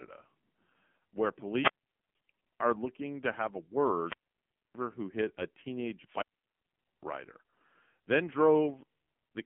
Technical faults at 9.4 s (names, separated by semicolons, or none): AMR narrowband mobile codec